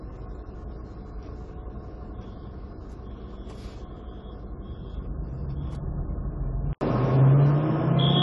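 AAC compression runs throughout: nothing is left above 11.5 kHz and clear smearing and warbling point to likely low-bitrate AAC-LC, around 32 kbps, discarding detail.

An input switch to a poorer device follows at 6.73 s: after an 80 ms gap, the band narrows to 7.6 kHz, the level shifts by a few decibels, and faint new background noise appears, likely from a lesser microphone.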